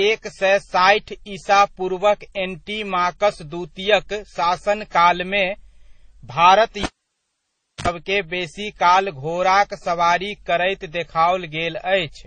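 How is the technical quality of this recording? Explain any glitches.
Technical quality is limited: the speech is band-limited and carries mixed codec artefacts throughout, and there is one dropout from a disconnected cable.

Transcoding between lossy codecs runs through the whole clip. Nothing is present above 9 kHz, so sibilants sound dull, and the speech carries a mix of different codecs' artefacts heard together. These are likely the result of passing the audio through several low-bitrate encoders in sequence, each one spending its limited bits re-encoding the previous codec's damage and adding its own distortion, with the lowest bandwidth limit carried through. The sound points to MP3 at around 32 kbit/s as the final stage.

The cable is pulled and plugged in between 6.83 and 7.88 s. A pop marks the disconnection, followed by close to 1 s of near silence. While only the tip of the plug touches, it picks up about 70 ms of 50 Hz mains buzz. 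A second pop then sounds as the speech returns.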